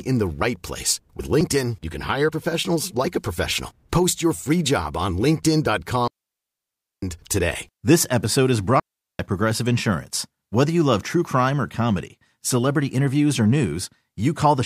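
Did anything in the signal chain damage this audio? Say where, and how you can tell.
Yes. A digital wireless dropout in the radio link mutes the speech at 6.08–7.03 s and 8.80–9.19 s, after "episode is". Starved of data, the receiver fades to near silence: the waveform flatlines and the spectrogram shows clean blank columns with no noise bursts at either edge.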